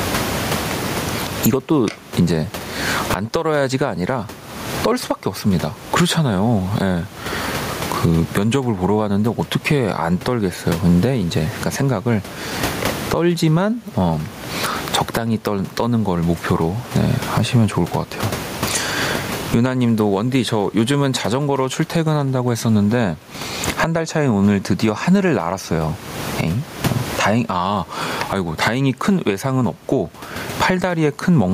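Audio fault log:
Throughout, gain pumping. The room noise sits about 31 dB below the speech. The level shifts by roughly 25 dB between gaps and speech. Loud and quiet passages sit close together, so the speech sounds squashed. The likely cause is input gain set far too high, with a fast limiter or compressor pulling it down on each peak and releasing it in the gaps.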